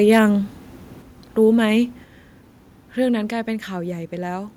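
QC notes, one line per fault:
0.12–0.19 s, microphone overload: the loudest syllables at the very start have their peaks flattened, giving a harsh, crackly edge over about 70 ms. The waveform tops look squared off where the signal runs past full scale by about 3 dB, with only a small share of samples pinned at the limit. The likely cause is microphone input gain set too high, driving the converter into hard clipping, which adds dense upper harmonics.
1.02 s and 2.04 s, microphone volume stepped down: at each point the whole signal, voice and room together, drops abruptly by about 4 dB with no fade. The two steps together leave the later audio about 8 dB quieter than the opening. The level shifts in a single jump rather than drifting. This pattern likely comes from call software automatically lowering the device's input volume after the earlier overload, in two fixed increments.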